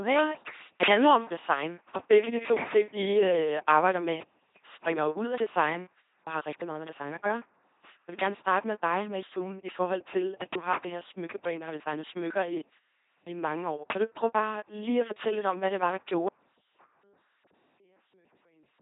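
From the first moment the speech has that buzzy, mechanical robot quality of the LPC-10 vocoder, running at 2.4 kbit/s. At that rate there's no waveform left, just a ten-pole vocal tract filter driven by either a pulse train or noise, with each stretch treated as fully voiced or fully unvoiced. That's why it buzzes and hisses, and the damage is heavy. Nothing survives above 3.8 kHz, so it's dull and narrow too.

At 16.29 s, right after "hvad det var der", the speech drops out abruptly and never comes back before the end. It isn't a pause or a fade. The signal just vanishes, leaving only a faint residue somewhere around 35 dB below the normal level. That points to an audio dropout to a faint residue, likely a lost feed with the path after the break still live and leaking a trace of sound.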